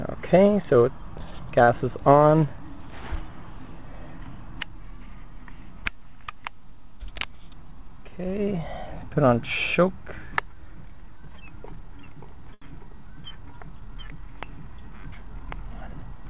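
A jitter buffer that ran empty twice, when packets arrived late, causes short stalls from a late packet at 1.64 to 1.80 s and at 12.54 to 12.64 s. Each time, the receiver held the last sound, for 34 ms and then 76 ms, and resumed from the same point, so nothing is lost but the audio drags briefly. The audio passed through a G.711 mu-law call path at 64 kbps, which leaves nothing above 4 kHz.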